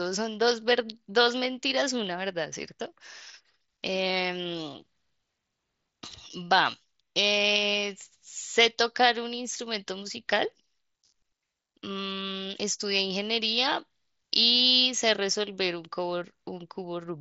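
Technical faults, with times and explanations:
No faults heard anywhere in this speech recording.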